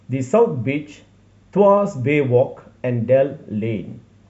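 Listening closely to this speech recording, nothing stood out as a technical problem at any point.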